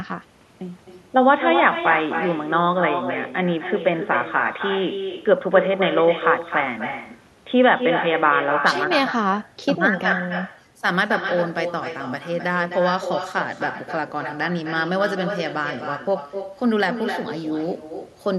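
From the start to 8.87 s, the speech sounds dull and boxy. This is most likely an input switched to a poorer device. At 8.87 s the sound clears and the level shifts by around 5 dB, with no silence at the switch. The narrow stretch also has its own faint noise floor, far below the speech.

Throughout the clip, the speech is followed around a third of a second later by a thinner copy at about 7 dB below it. This is echo with no canceller. The far end's loudspeaker feeds back into its microphone, and nothing removes it.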